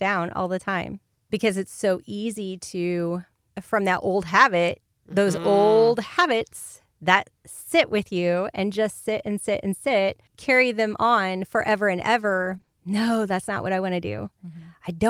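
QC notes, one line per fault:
12.21–12.69 s, repeated packet loss (robotic sound): right after "them on forever and", the speech breaks up over three short gaps, the longest 20 ms. About 60 ms is patched by stretching the preceding sound and about 60 ms is missing, so roughly 13% of the stretch is concealed, leaving a choppy texture. On a spectrogram, harmonics smear into flat repeated blocks beside thin empty slivers. The waveform shows clipped-off chunks and repeated cycles.
14.25–14.27 s, lost packet rebuilt from error correction: just after "what I want to", one 20 ms packet goes missing and is replaced by the low-bitrate backup copy carried in the next packet, so there is no gap. That frame sounds rougher and grainier than its neighbours because the copy was coded more coarsely. A spectrogram shows a narrow, noisier column with fuzzier harmonic detail. The waveform stays continuous, with only a change in texture.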